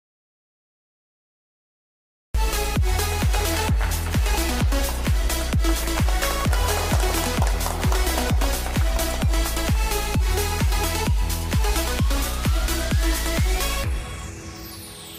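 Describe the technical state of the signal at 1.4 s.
At 1.4 s we're inside an audio dropout to silence running from the start to about 2.35 s: pure silence with no room tone, likely a lost input while recording carried on.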